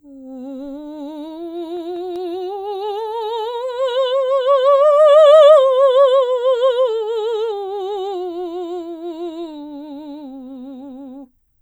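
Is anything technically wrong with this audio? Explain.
Yes. The music contains CD scratch ticks between 1.57 and 2.35 s, a run of five regular ticks, each under a millisecond. A scratch or blemish on the disc corrupts more data than error correction can reconstruct, once per revolution. The player conceals the damaged samples by interpolating or muting them. Here that produces a short train of clicks at roughly five per second, matching the disc's rotation rate.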